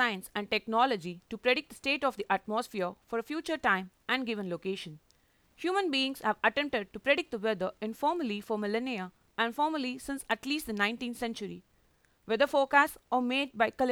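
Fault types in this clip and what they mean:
No faults can be heard: the speech signal stays continuous and stable throughout, with no audible interruption or distortion.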